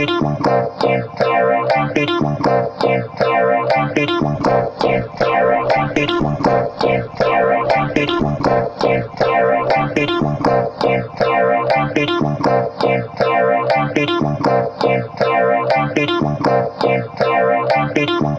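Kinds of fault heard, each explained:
Call bitrate drop: the call's bandwidth estimate fell, so the encoder squeezed everything into far fewer bits from 4.35 to 13.83 s. The top end shrinks from 20 kHz to 8 kHz, and the sound goes coarse and watery, worst for about 4.7 s, which fits a dip toward 9 kbps.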